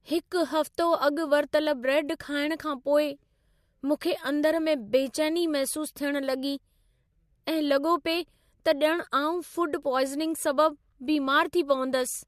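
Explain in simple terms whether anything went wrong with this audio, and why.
Nothing went wrong here.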